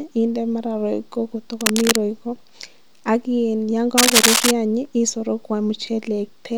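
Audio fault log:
1.61–1.96 s and 3.97–4.51 s: cable scratch noise. Two bursts of dense, irregular crackle sit over the speech, the first about as loud as the speech and the second somewhat louder. This is likely a worn cable or connector being moved, its contact resistance fluctuating rapidly.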